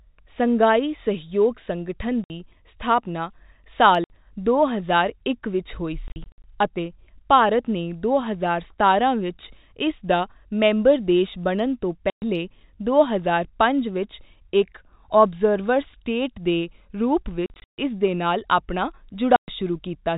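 Packet loss filled with silence cuts the speech at 2.24, 4.04, 6.08 to 6.44 (before "ਅਤੇ ਭਾਰਤ ਨੇ"), 12.1, 17.46 to 17.78 (after "ਸਟੇਟ ਦੇ ਰੂਪ") and 19.36 s (after "ਨਾਲ ਆਪਣਾ"). The gaps run 60 to 220 ms in steps that fit 20 ms packets, and each starts and ends with a hard edge. The telephone band of the G.711 line stays audible throughout.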